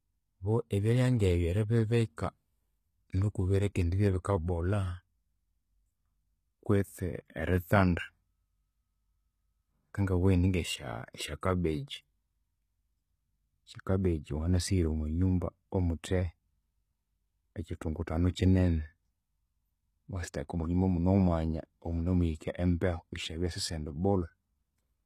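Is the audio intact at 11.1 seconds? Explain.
No. At 11.13 s there is a pre-echo: a brief hiss, about 15 ms long, arrives just ahead of a sharp onset and blurs its edge. A transform codec spreads quantisation noise across its whole block, so when a loud attack lands near the end of a block, noise sized for that attack also fills the quieter stretch before it. The onset therefore loses its crispness and seems to begin early with a grainy smear.

The same moment also carries the plainly audible damage heard across the whole speech clip, most likely from HE-AAC compression at a bitrate around 20 kbps. The treble there is not the original signal. It is rebuilt from lower bands copied upward and shaped by a coarse envelope, so the upper harmonics fail to line up with those below the crossover. Sibilants come out gritty, metallic or lisped rather than clean.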